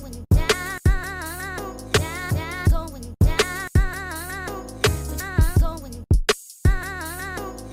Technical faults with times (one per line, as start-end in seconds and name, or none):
none